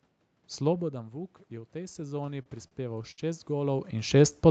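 A short piece of speech heard through a call connection, band-limited so that nothing sits above 8 kHz, which fits a wideband call codec. The first fault is automatic gain rising from 0.88 s to 3.89 s. After the level at the microphone falls by about 13 dB, around where the talker seems to lean away near 0.5 s, the gain control slowly pulls the signal back up by about 10 dB. Voice and room noise grow together over roughly three seconds. The waveform envelope widens steadily rather than jumping, and the noise floor between syllables brightens on a spectrogram. Overlapping this, repeated stalls (stutter) run from 1.93 s to 3.20 s. The packet stream kept falling behind, so the jitter buffer emptied ten times, and each time the receiver stretched the last sound until fresh audio arrived. These fills total 202 ms, about 16% of that stretch, with the longest at 65 ms. Nothing is lost, but the speech drags and hiccups. 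The spectrogram shows smeared, repeated frames where harmonics freeze briefly, and the waveform shows repeated cycles in place of new onsets. Finally, a jitter buffer slow-down occurs from 4.16 s to 4.47 s. The receiver, short of reserve, duplicated single pitch periods to gain 47 ms of delay, so the audio plays at about 87% speed with unchanged pitch. Sounds are drawn out. The waveform shows runs of near-identical periods, and spectrogram harmonics stretch horizontally at constant height.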